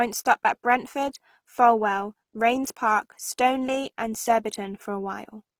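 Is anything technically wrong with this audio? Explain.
Yes. Throughout, the speech sounds grainy and rough, its tones turned noisy. This is likely Opus compression in music mode filling starved bands with noise, which fits about 16 kbps.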